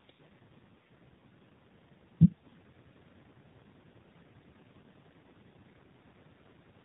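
Throughout, the AMR narrowband mobile codec leaves a buzzy, synthetic speech tone consistent with a low mode near 7.4 kbps. The spectrogram shows nothing above 4 kHz. From 2.46 to 2.59 s, AMR bit errors make the speech hoarse and gargly at steady pitch and level, with smeared harmonics and ragged spectral texture across roughly six 20 ms frames.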